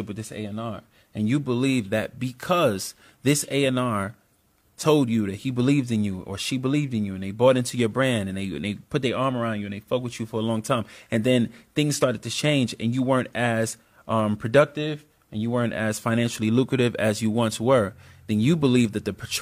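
No technical faults are audible.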